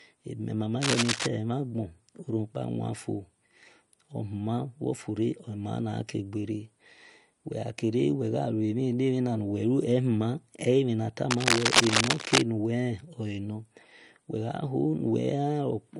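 From the start, the speech carries the smeared, watery artefacts of low-bitrate audio saved at a high bitrate. The file likely passed through MP3 at something like 49 kbit/s and was then re-encoded around 239 kbit/s. Because the spectrum still runs to about 20.1 kHz, it is the artefacts that give this away, not a bandwidth cut-off.

Cable scratch noise appears from 0.80 to 1.26 s, just after "ebime mama", at roughly the level of the speech. It returns from 11.31 to 12.42 s, somewhat louder than the speech. Both bursts are dense, uneven rustling, likely from a worn connector or cable being moved. They are irregular scraping rather than the isolated sharp ticks of clicks.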